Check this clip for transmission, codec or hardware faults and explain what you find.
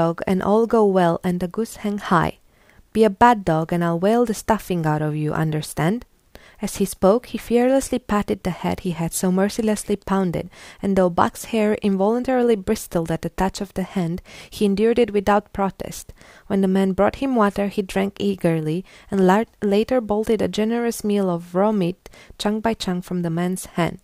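No faults detected.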